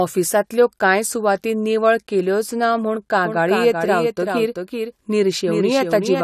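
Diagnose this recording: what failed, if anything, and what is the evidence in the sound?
From 3.25 s on, a copy trails about 0.4 s behind, a few dB quieter: a doubled audio track, likely from a slower second path or misaligned edit.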